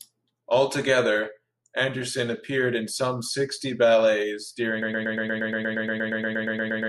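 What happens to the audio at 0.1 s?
At 0.1 s the speech plays through intact, with no audible fault at that moment.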